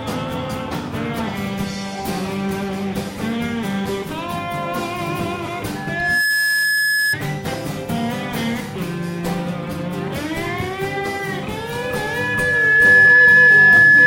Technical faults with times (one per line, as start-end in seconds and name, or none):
5.75-7.17 loudspeaker feedback squeal
11.56-14.06 loudspeaker feedback squeal